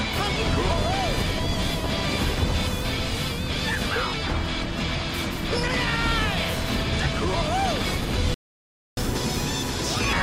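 A playback stall at 8.34 s cuts the audio to silence for about 0.63 s, until 8.97 s, before it resumes where it stopped. The likely cause is the player running out of buffered data, or its output thread being briefly blocked, so nothing reached the output. Catch-up at higher speed follows from 8.97 s to 10.13 s. The player resamples its backlog to play 1.5 times faster, which raises the pitch by roughly seven semitones, so the sound is audibly sped up and sharpened until it has regained most of the lost time and drops back to normal.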